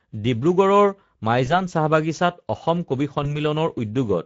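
From start to end, the speech carries Speex codec damage. It is plainly audible. Speex is a CELP codec. It rebuilds speech from a pitch predictor, a vocal-tract filter and a coded excitation. Here the excitation gets too few bits. The result is a rough, hoarse texture with a grainy noise under the voice. The bitrate is about 17 kbps.

At 1.45 s, VoIP packet loss concealed by the speech codec begins. It lasts to 1.58 s. A second event runs from 3.23 s to 3.36 s. Each gap fits one lost 20 ms frame. The decoder fills the hole by repeating its last pitch and filter at falling gain. That gives a short, fading smear. Each frame builds on the one before. So the voice stays weak or distorted to the end of each event, well past the lost 20 ms itself.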